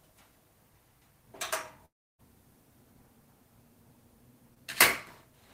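At 1.85 s the audio stops arriving for about a third of a second, until 2.21 s. The last sound is briefly carried on, then gives way to roughly 0.32 s of silence before audio resumes with the missing portion skipped. This is likely a long network dropout.

From 4.55 to 4.58 s there is a short concealed packet loss. About 20 ms of audio failed to reach the decoder in time, and the receiver extended the preceding sound to cover the gap before blending back, leaving a brief smear.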